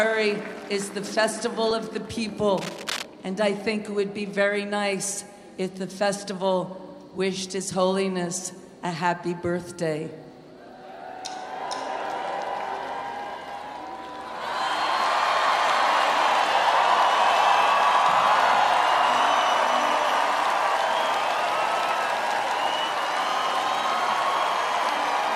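From 2.57 to 3.05 s, a burst of cable scratch noise sits over the sound. It is dense and uneven, like scratching or rustling, at roughly 10 dB below the signal. The likely cause is a worn cable, connector or control being moved, so its contact resistance jumps about.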